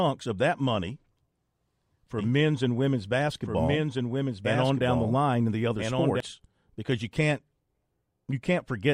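From 2.18 s to 6.20 s, starting just before "because you can't", there is a doubled audio track. A dry, full-band copy trails about 1.5 s behind, roughly 5 dB quieter. It starts and stops abruptly. Likely cause: a slower second capture path, or an edit holding two copies out of step.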